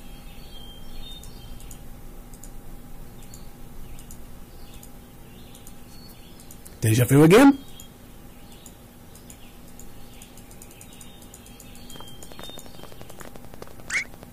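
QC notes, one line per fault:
6.89 to 7.50 s, hard clipping. The peaks are driven about 13 dB past what the stage can pass, so they are cut flat. The flat tops add high harmonics. Every loud moment in this stretch turns into a harsh fuzz.
10.44 s, damaged data in a compressed stream. A short burst of bad compressed data makes the decoder misread the frame and lose sync. It then searches for the next valid header. The result is a brief glitch.
12.23 to 14.24 s, train of clicks. About twenty near-identical clicks arrive at a steady 11.5 per second. They peak at roughly the level of the signal itself. The source is likely interference or a faulty connection. It is heard as regular ticking over the sound.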